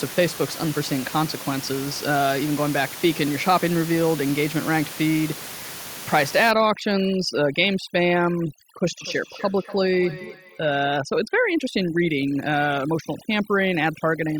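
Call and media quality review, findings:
Overdone noise removal, 6.51 s to end of clip. Room noise, about 13 dB below speech beforehand, drops and breaks up into twinkling specks. The noise suppressor is set too aggressive, cutting individual bands near its noise estimate along with quiet speech detail. Unlike band-limiting, the artefacts flicker rather than sounding uniformly muffled.

Feedback echo between two devices, 8.93–11.01 s. Discrete repeats at about 300 ms intervals, each thinner and more ringing, loudest about 17 dB below speech. A second device in the room replays this microphone's signal, which is re-captured, and the local echo canceller can't remove another device's playback. The fixed spacing separates it from room reverb.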